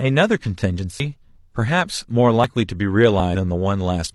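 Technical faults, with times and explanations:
1.0 s, 2.44 s and 3.2 s, dropped buffer (overrun): each is a jump where the speech lurches forward with no gap of silence. Roughly 70 ms goes missing at 1.0 s and around 40 ms at each of the later two. The likely cause is the capture side falling behind, so the hardware overwrote those samples before they were read, and the audio on either side got butted straight together, which is what makes the jump.
3.31 to 3.35 s, damaged data in a compressed stream: a short glitch lasting about 40 ms, just after the third jump. Here the encoded stream itself is corrupted, so the decoder misreads those frames, loses its place, and has to hunt for the next valid frame header before it can carry on. That garbled decode is the glitch.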